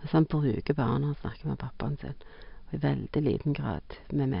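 Listening to the speech, nothing stood out as a technical fault at any point.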